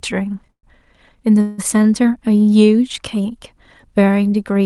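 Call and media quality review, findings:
Call audio freeze, 0.51–0.65 s and 1.41–1.60 s: speech halts, last sound stretched into fading buzz, then resumes intact, later. Likely jitter-buffer underrun from late packets. Spectrogram: smeared frozen partials decaying; first gap ends in about 80 ms flat silence on waveform.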